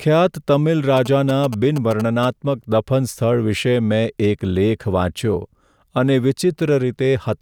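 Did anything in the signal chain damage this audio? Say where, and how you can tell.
Yes. GSM signalling bursts reach the analogue wiring from 0.97 to 2.25 s, just before "દફન સ્થળ": a galloping dit-dit-dit of short 217 Hz buzzes, around 10 dB below the speech. The circuit rectifies a nearby 2G phone's radio pulses, showing spectrogram stripes and a harmonic comb, and clustered waveform spikes.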